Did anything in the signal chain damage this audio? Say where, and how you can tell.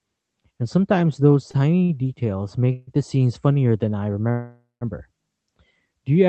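Yes. At the network stage, two late packets left the call's jitter buffer empty, producing a short stall from a late packet at 1.51 to 1.57 s and 1.84 to 1.92 s. The receiver held the last sound for 25 ms and then 51 ms, so each moment drags with a faint buzz or dip, yet nothing is lost.

Two longer breaks are call audio freezes, likely from packets held up in the network and arriving late. At 2.73 to 2.90 s, about 142 ms of stretched, fading buzz or hiss fills the wait. At 4.31 to 4.84 s, a 500 ms hold decays into 160 ms of silence before the sound resumes from where it stopped.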